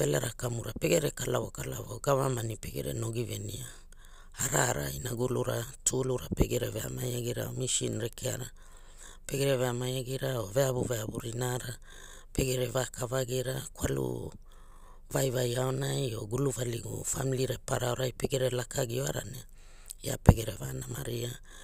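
A speech recording with a single electrical switching spike at 8.13 s, right after "veamai agira or misin": a sharp, isolated snap peaking at about -25 dBFS and riding on top of the speech. The likely cause is a nearby switch, motor or static discharge arcing briefly and coupling into the audio line.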